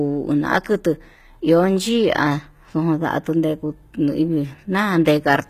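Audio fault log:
Throughout: HE-AAC compression. The treble is plainly damaged, with s sounds turning gritty and metallic, because the upper band is not coded directly but copied up from lower bands and shaped with a coarse envelope. Its harmonics fail to line up with those below. The likely cause is HE-AAC v2 at a low rate, which fits about 20 kbps. A spectrogram shows a hard ceiling near 14.9 kHz and blocky, repeated-looking texture in the high band.
5.05 s: pre-echo. A hiss of about 13 ms arrives just before a sharp attack near the end of the clip, and the onset sounds softened rather than crisp. The codec spread quantisation noise evenly across a transform block, so noise sized for the loud attack leaked into the quiet moment ahead of it. On a spectrogram a thin broadband smear precedes the attack's vertical edge, and the waveform shows low-level fuzz before the transient.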